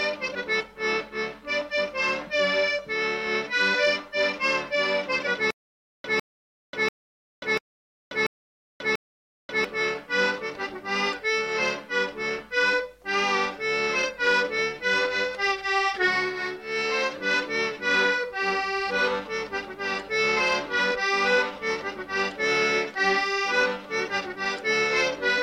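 From 5.51 to 9.65 s there is a stutter with silent gaps. A 153 ms burst repeats six times, each followed by about 537 ms of dead silence, likely a stalled stream.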